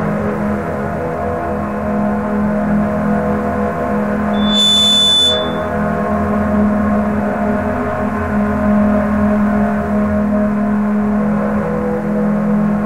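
From 4.33 to 5.70 s a loudspeaker feedback squeal rises at 3.5 kHz. The microphone is re-amplifying its own loudspeaker, so that one frequency swells over roughly a third of a second to slightly above the sound. Unlike a steady interfering whistle, it grows rather than starting at full level.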